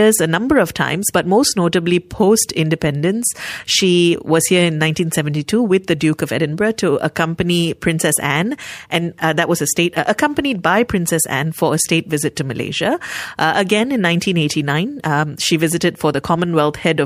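Clock slip clicks run from 0.31 s to 16.94 s: faint, regular ticks roughly every third of a second, around seventy in all. The likely cause is two unsynchronised clocks about 100 ppm apart, each slip dropping or repeating a single sample.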